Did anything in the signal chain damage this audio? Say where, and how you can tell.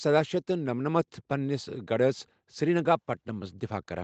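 No, nothing in the signal chain damaged this audio.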